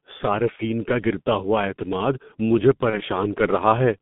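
Throughout, the speech carries heavy G.723.1 codec damage. The line passes only about 150 Hz to 3.6 kHz, so the top end is gone and the sound is muffled. The codec works in 30 ms frames at a very low rate, which fits its 6.3 kbit/s mode. Its model of the voice updates slowly. Consonants smear together and the voice turns hoarse and grainy.

At 0.56 s, VoIP packet loss is concealed by the speech codec. The dropout fits a single lost 30 ms frame. The decoder fills the gap by stretching the last sound it had, with falling gain. This gives a brief smear that fades. The disturbance lasts until 0.62 s, because the following frames rebuild from the damaged state. The same happens at 2.90 s. That time the weak, distorted recovery runs longer, to about 3.01 s.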